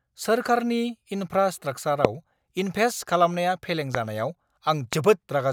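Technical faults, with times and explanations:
2.05–2.07 s, 3.95–3.97 s and 4.93–4.95 s, loud pop: a sudden voltage step or spike, likely from a plug, switch, static discharge or driver glitch, enters the signal chain, and the circuits after it shape it into a brief pulse. Each is a single sharp pop lasting about 20 ms. The first two stand out roughly 20 dB above the speech and the last about 15 dB, while the speech continues underneath.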